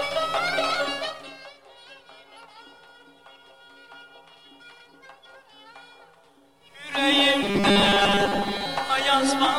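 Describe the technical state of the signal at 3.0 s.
At 3.0 s the signal is intact, with no fault to be heard at that moment.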